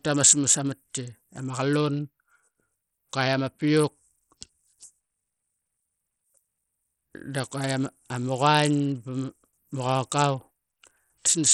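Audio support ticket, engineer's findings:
Treble flickers, gritty noise throughout, nothing above 13 kHz. Likely Bluetooth SBC compression. Sound fits about 64 kbps. Top sub-bands starved of bits.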